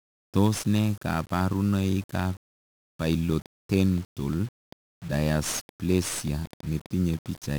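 From start to finish the speech passes through 1-bit DFPWM compression, where each sample is reduced to a single bit nudging an adaptive level up or down. The heavy quantisation noise, consistent with a stream of about 48 kbps, makes everything fuzzy and crackly, with the treble lost under hiss.

From 3.32 s to 7.36 s a train of clicks appears, likely from interference or a faulty connection injecting pulses. Around twenty similar clicks arrive at about 4.2 per second with uneven spacing, popping roughly as loud as the speech and audible in pauses too.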